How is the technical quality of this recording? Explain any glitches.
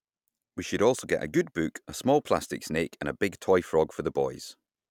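Nothing stands out here; I don't hear any glitches anywhere in the recording.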